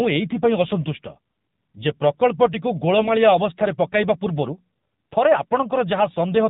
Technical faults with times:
0.00-6.49 AMR narrowband mobile codec
2.99-3.10 AMR bit errors

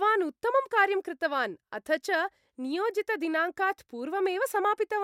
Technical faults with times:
none

